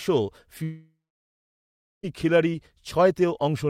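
At 0.63 s the speech breaks off into a fading buzz, then silence until 2.05 s. This is a long network dropout, likely lost packets, with about 1.4 s missing.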